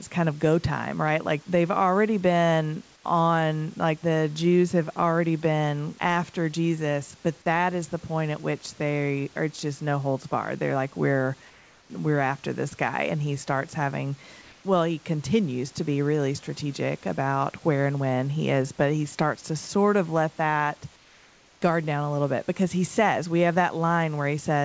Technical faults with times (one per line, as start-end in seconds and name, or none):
2.96-3.04 comfort noise in place of the background
11.50-11.90 comfort noise in place of the background
20.96-21.62 comfort noise in place of the background